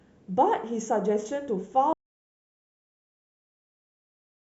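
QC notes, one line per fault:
1.93 s to end: audio dropout to silence. The speech cuts off mid-flow and never returns; the remaining stretch is silent with no room tone at all, most likely because the input was lost while the recorder kept writing silence.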